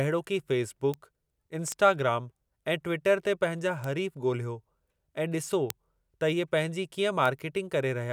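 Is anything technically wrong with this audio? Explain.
Yes. The speech carries five bit error spikes, at 0.94, 1.72, 3.84, 5.70 and 7.26 s. Each is a single corrupted sample. One flipped bit throws that sample's value off by a power of two, then the next sample is correct again. The spikes reach about -16, -10, -16, -4 and -16 dBFS, so the one at 5.70 s is loudest. Each sounds like a sharp, bright tick across the whole spectrum, unrelated to the speech around it.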